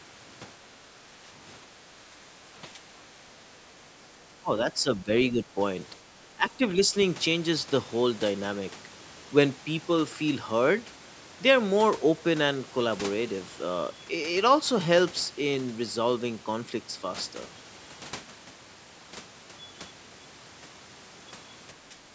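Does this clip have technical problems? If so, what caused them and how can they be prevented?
Yes. The speech dips by about 10 to 15 dB at 0.62–0.91, 1.6–2.19, 2.73–2.81, 4.41–4.51, 4.82–5.59, 6.22–6.95 and 21.89–21.99 s. That's likely speech suppressed in double talk, with the echo canceller ducking the talker while the far end spoke. Better acoustic echo cancellation or a headset would prevent it.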